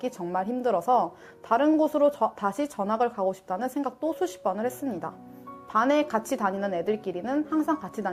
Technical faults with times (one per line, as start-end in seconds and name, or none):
none